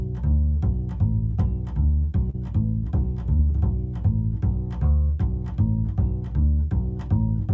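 At 2.30 to 2.36 s and again at 3.38 to 3.41 s the music briefly smears: short concealed packet loss, where about 40 ms and then 20 ms of audio arrived too late and the decoder patched the gap.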